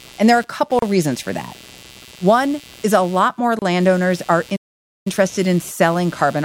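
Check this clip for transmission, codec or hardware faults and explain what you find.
There are three problems here: a steady buzz under the whole clip, two short dropouts at joins, and one longer stall.

Computer activity noise runs from start to finish, a buzz pulsing around 150 Hz and sitting roughly 25 dB under the speech. The computer's processor or graphics load is shifting the shared ground of the audio circuit, so the buzz follows that activity rather than the talking.

There are two gaps at joins of encoded pieces. The first is at 0.79 to 0.82 s, about 33 ms, right before "reasons for that". The second is at 3.59 to 3.62 s, about 29 ms, just after "is a lot more". Separately encoded chunks were butted together untrimmed, so encoder delay and end-frame padding leave short silences with smeared edges, and then the speech picks up where it left off.

A playback stall runs from 4.56 to 5.07 s. 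The sound cuts out mid-flow for about half a second before carrying on. That's likely the player running dry on data or its thread getting blocked until it recovered.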